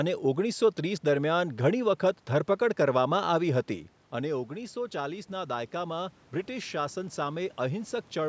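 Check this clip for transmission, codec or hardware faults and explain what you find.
One fault shows up, and it sits in the call's level control rather than the line or codec. From 4.25 s to 8.0 s the automatic gain rising behaviour takes over. Around 3.5 s the talker drifts away and the input falls by about 11 dB. The gain control reads this as a quiet signal and slowly adds about 6 dB. The voice and the room noise behind it swell up together over several seconds. This recovers only part of the lost level.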